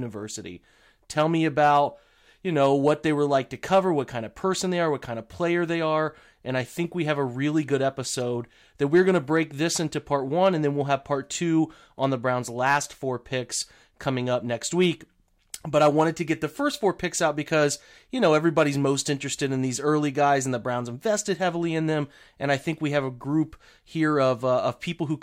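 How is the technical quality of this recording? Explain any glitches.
The recording has one glitch, a corrupt frame decoded at 8.20 s. Flipped bits in a single compressed frame were decoded anyway, scattering energy across wrong frequencies as a brief chirp, squeak, blip or burst of noise, peaking around -30 dBFS.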